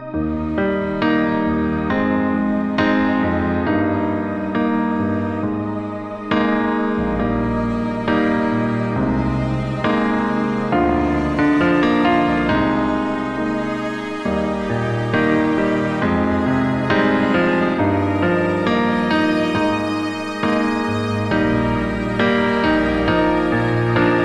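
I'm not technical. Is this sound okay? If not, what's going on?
Yes, this sound is fine, with nothing wrong.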